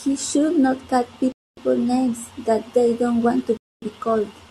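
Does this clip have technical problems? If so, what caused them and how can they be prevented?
Yes. Two abrupt 250 ms silent holes appear at 1.32–1.57 s, just after "should not call", and at 3.57–3.82 s, after "they don't want to". This is a gap between chunks: 2 s blocks joined with silence between them. Buffering ahead so each chunk starts seamlessly prevents it.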